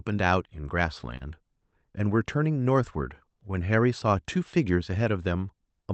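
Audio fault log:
throughout: clock drift between sender and receiver. Faint, unevenly spaced timing hiccups recur because the sender's clock runs about one and a half percent slow, so the receiver keeps padding a draining buffer.
1.17–1.22 s: short stall from a late packet. A sound is held slightly too long with a faint buzz or dip. A packet arrived late, and the receiver stretched the previous audio by 30 ms, so nothing is lost.
3.29–5.84 s: repeated timing corrections. At 98% speed, the receiver repeats small slices to keep pace with the slow sender, adding around 70 ms overall.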